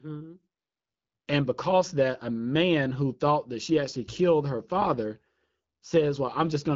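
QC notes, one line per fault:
No faults heard.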